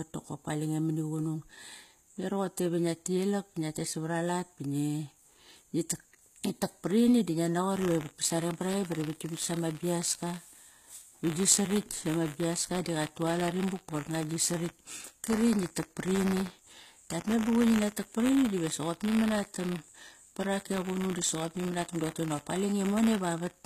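From the very start the speech has that gritty, lispy top end you get from HE-AAC compression. The damage is plainly audible. The likely cause is a low-bitrate encode, and the sound fits something around 20 kbps, where only the lower spectrum is really coded and the treble is rebuilt by copying lower bands upward. Those copied harmonics don't line up with the real ones, so the s sounds come out metallic. Nothing is left above 14.9 kHz.

At 7.75 s, right after "tak parini di ngia", buffer tearing kicks in and runs to the end. There's a steady robotic buzz at 100 Hz that's only there while there's signal. The writer and reader of the output buffer have drifted into each other, so a small slice of each period, roughly 2 percent, replays audio from about 30 ms earlier, with hard joins on both sides. The 100 Hz rate points to periods of about 10 ms.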